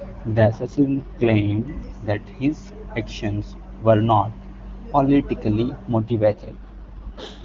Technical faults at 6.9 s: AMR rate drop

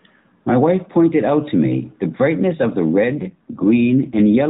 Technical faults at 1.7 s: none

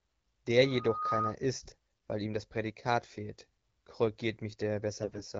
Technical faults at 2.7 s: one channel drops out

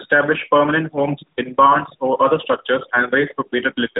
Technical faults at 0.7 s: tandem speech coding

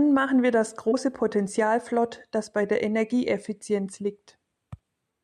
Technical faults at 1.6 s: none

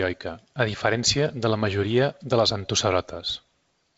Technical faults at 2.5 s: none

